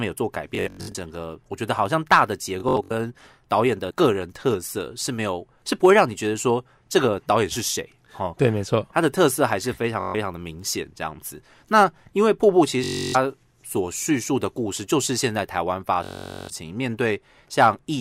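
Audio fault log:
0.55–0.95 s, 2.60–2.91 s, 10.00–10.14 s, 12.84–13.16 s, 16.04–16.50 s: Bluetooth stutter. Speech packets arrive late or not at all. The receiver replays its last short slice, giving a buzzing, machine-gun repeat. Each burst covers between 128 ms and 448 ms of lost audio. Speech then resumes further on, as if it had kept playing.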